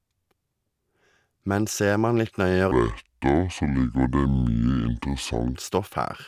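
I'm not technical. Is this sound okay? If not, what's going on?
No. From 2.71 to 5.55 s the speech drops about 7 semitones and slows to two-thirds speed, sounding deep and sluggish. That is a wrong sample rate fault: the audio was played back slower than it was recorded, which fits 48 kHz audio played at 32 kHz.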